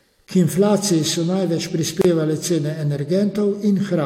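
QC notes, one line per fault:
2.02–2.05 s, gap at a join of encoded pieces: separately encoded pieces were joined without trimming encoder delay and end padding, so a 30 ms gap opens right after "inflaciji so največ". Its edges are smeared by the codec, so the silent part is shorter, and the speech resumes where it stopped.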